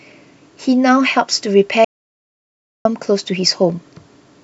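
At 1.85 s the speech stops abruptly, mid-flow, and the signal drops to silence until 2.85 s, when it resumes just as suddenly. This is an audio dropout to silence lasting about 1.0 s. The gap carries no room tone or noise floor at all, which points to silence being written while the input was absent, likely from a lost connection or a momentary mute. Whatever was spoken in that second is missing.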